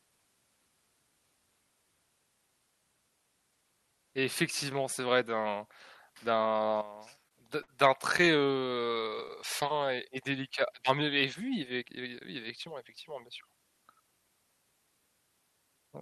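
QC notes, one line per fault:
7.28 to 7.33 s and 7.63 to 7.70 s, short stall from a late packet: The speech briefly hangs, then carries on. A packet came late and the jitter buffer ran dry. The receiver held the last sound until it arrived, for 28 ms in the first stall and 52 ms in the second. Nothing is lost. The held sound gives a faint buzz or dip. Each stall also pushes everything after it later, by the same amount.
8.18 to 9.31 s, repeated stalls (stutter): The speech drags and catches nine times across this stretch. Packets kept arriving late, so the jitter buffer emptied again and again. Each time, the receiver stretched the last sound until it could resume. The gaps are brief, 15 ms at most, and total 87 ms. That is about 8 percent of the span. Nothing is missing. The rapid run of small holds makes it stutter.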